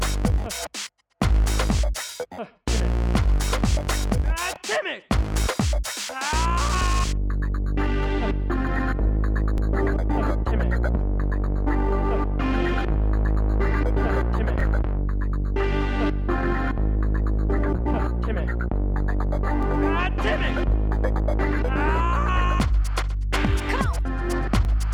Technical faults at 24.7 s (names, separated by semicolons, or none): overlapping chunks